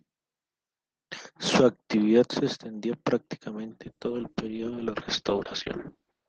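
A speech recording with a call bitrate drop from 3.85 s to the end: highs above about 6 kHz vanish and the sound turns rough and watery, which fits the encoder falling from roughly 32 to 8 kbps. Unlike a simple low-pass filter, coarse coding adds grainy artefacts, with no dropouts.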